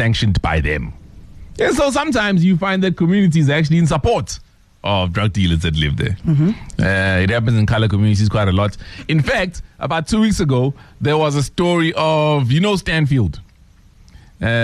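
The signal stays continuous and stable throughout, with no audible technical faults at any point.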